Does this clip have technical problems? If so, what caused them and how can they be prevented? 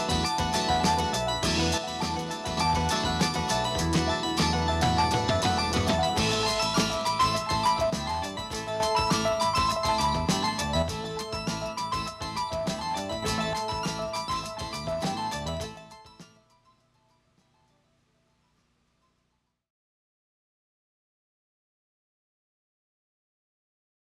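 Yes. The sound abruptly drops by about 6 dB at 1.78–2.57 s, 7.90–8.80 s, 10.82–13.22 s, and from 13.53 s to the end. That's likely one channel dropping out, so the mono sum loses half its shared signal. Secure the stereo cabling and connectors before recording.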